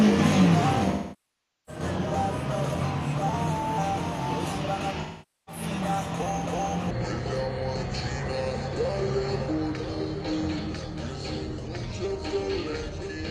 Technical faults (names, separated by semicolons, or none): AAC frame loss with concealment; section at the wrong speed